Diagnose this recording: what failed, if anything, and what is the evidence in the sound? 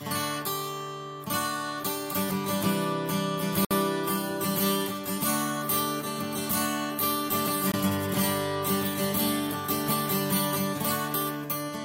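The failure is at the playback stage: a gap between stream segments. The sound drops to hard-edged silence from 3.65 to 3.71 s (about 60 ms) and again from 7.72 to 7.74 s (about 20 ms). The two holes fall roughly 4 s apart, matching a 4 s segment length. Timestamps on adjacent segments fail to meet, so the player inserts silence to bridge them. Nothing is lost; the timeline is only stretched.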